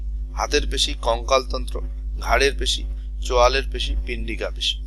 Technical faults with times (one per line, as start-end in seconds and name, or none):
none